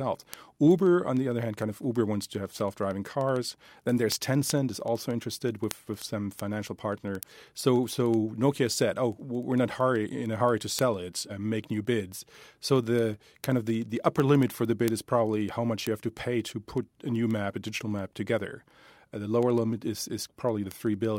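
From 0.11 to 21.17 s, word clock ticks: an unlocked receiver clock, roughly 300 ppm off, drops or repeats single samples, giving sharp, uneven ticks every 70 ms or so.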